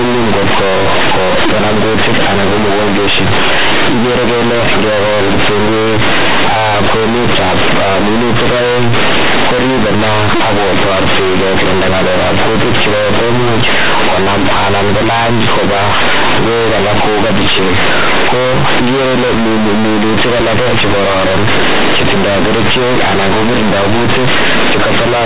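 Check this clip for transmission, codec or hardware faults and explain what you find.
One fault is present, and it runs through the whole recording. The mu-law telephone coding underneath behaves as G.711 should, at 8 kHz. That is why nothing above 4 kHz is heard.

The fault is companded audio read as linear. The speech bytes were mu-law encoded but are played back as plain 8-bit samples, without expansion. Every sign change throws the output across half its range. Quiet passages come out as loud as peaks. The result is harsh, buzzy distortion with heavy noise filling the pauses.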